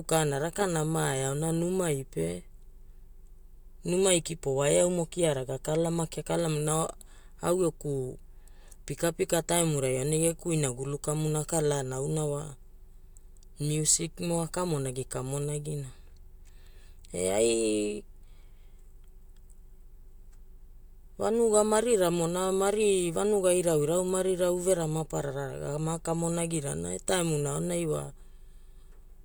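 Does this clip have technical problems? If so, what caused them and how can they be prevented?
No, nothing technical stands out in this speech recording, so there's nothing here that needs fixing or preventing.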